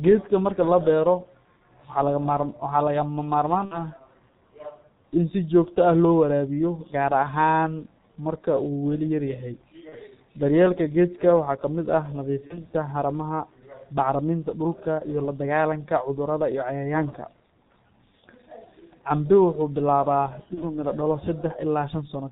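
Throughout, the speech carries G.723.1 codec damage at 6.3 kbit/s. Nothing passes above 4 kHz. Consonants blur, and the voice sounds muffled and hoarse. VoIP packet loss concealed by the speech codec follows at 3.65 to 3.84 s, a gap that fits about 60 ms missing. It recurs at 9.89 to 9.98 s after "uu weli yar yahay", at 12.48 to 12.67 s before "haramaha bacriminta dhulka", and at 20.54 to 20.63 s before "miro dhalo". The last three each fit one lost 30 ms frame. The decoder stretches its last sound into a fading buzzy tone or coloured noise, and the voice stays weak briefly afterward.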